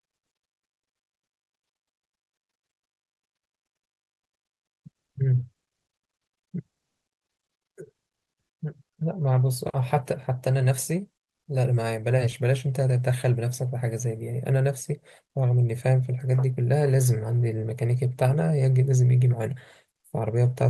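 No technical faults can be heard in the speech; it carries the ordinary character of an Opus call path, with a top end that stops short in a way that fits a band limit of around 12 kHz.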